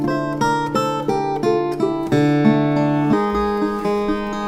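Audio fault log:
3.13–4.48 s, section at the wrong speed: from 3.13 s to the end of the clip the audio runs 1.4 times faster than the preceding material, so timing and pitch shift together at the boundary and stay shifted. Everything in this stretch sounds hurried and sits about five semitones higher than before. The likely cause is that this segment was played out or resampled against the wrong clock, which compresses it in time and raises its pitch by the same ratio.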